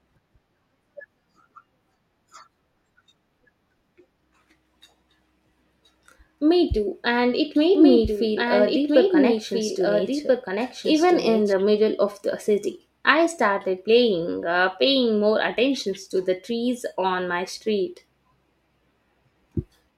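From 7.75 s to 11.53 s, between "too and it" and "middle of the city", the speech has a doubled audio track. A second full-band copy trails the original by about one and a half seconds at roughly 5 dB lower, cutting in and out abruptly with no decay or room colour. The likely cause is the signal being captured again through a slower path. A spectrogram shows the same harmonic patterns repeated, slightly weaker and shifted right, and the waveform's envelope changes suddenly at both boundaries.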